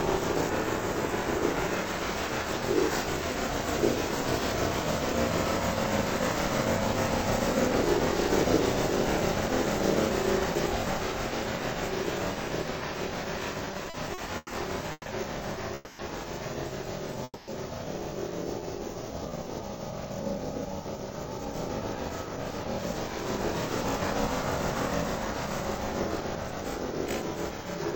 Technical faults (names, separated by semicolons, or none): repeated stalls (stutter); call audio freeze; jitter buffer slow-down; jitter buffer speed-up